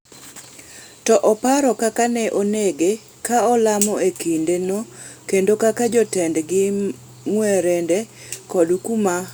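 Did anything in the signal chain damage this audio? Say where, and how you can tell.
No, nothing in the signal chain damaged this speech recording. Listening across the whole clip, no stage leaves an audible mark on the sound.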